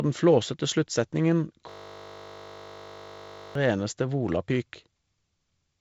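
From 1.70 to 3.55 s the speech turns into a steady 50 Hz buzz. This is a system hang loop: the system froze while the hardware kept replaying one 20 ms buffer.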